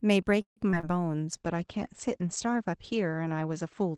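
A call audio freeze runs from 0.41 to 0.58 s. The sound stalls, trails off into about 0.12 s of silence, then resumes where it left off, so roughly 0.15 s of gap has been inserted and nothing lost. Most likely, packets were delayed and the jitter buffer ran dry.

Short concealed packet loss follows at 0.70 to 0.75 s and again at 0.81 to 0.85 s. Each time about 20 ms of audio never reached the decoder, which extended the preceding sound to cover the hole and blended back, leaving a brief smear or wobble.

A call bitrate drop begins at 1.33 s and lasts to the end. The sound turns coarser and more muffled, consistent with Opus falling from around 32 kbps to around 11 kbps after the bandwidth estimate sank. The top of the spectrum narrows from 12 kHz to 8 kHz, and the roughest stretch lasts about 1.3 s.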